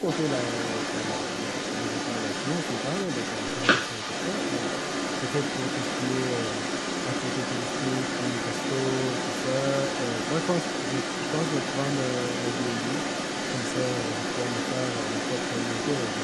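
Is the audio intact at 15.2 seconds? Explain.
No. From 0.0 to 16.23 s, an echo leak runs: a 226 ms delayed copy, roughly as loud as the speech, likely passed by an incomplete far-end echo canceller.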